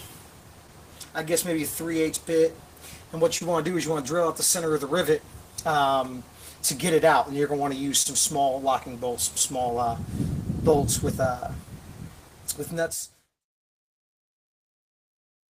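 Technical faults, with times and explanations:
Throughout: clock drift between sender and receiver. The sender's clock runs roughly 2% slow, so the receiver's buffer keeps draining and must be topped up. This shows as a slight unsteadiness in tempo, with small irregular seams in the waveform scattered across the clip.
0.08–14.90 s: repeated timing corrections. To keep pace, the receiver repeatedly stretches short pieces, playing at about 99% speed and adding roughly 200 ms overall. These are faint hiccups, visible as duplicated waveform cycles and slightly smeared spectrogram frames at uneven spacing.
0.67–4.74 s: scattered short gaps. About four late or lost packets were each patched by extending the preceding sound, around 50 ms in all, the longest near 30 ms. Each gives a brief tick or smear, seen on a spectrogram as short horizontally stretched, frozen-looking slices.
8.02–14.99 s: scattered short gaps. 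About seven more holes, around 70 ms concealed in total and none much over 30 ms, are filled by continuing the last sound. These patches overlap the smooth fade-out from about 12 s to 13.45 s and appear as small frozen spectral slivers and repeated waveform fragments.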